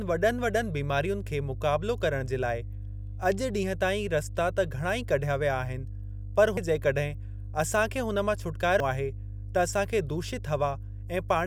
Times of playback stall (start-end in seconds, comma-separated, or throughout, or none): none